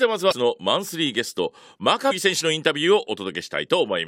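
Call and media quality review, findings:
Damaged data in a compressed stream, 0.31–0.33 s: short glitch over the speech. Probable component: decoder input. Corrupted frame bytes misread, decoder loses sync, resyncs at next frame header.

Damaged data in a compressed stream, 2.10 s: second brief glitch. Same mechanism: bad frame data breaks decoder sync until the next valid header is found.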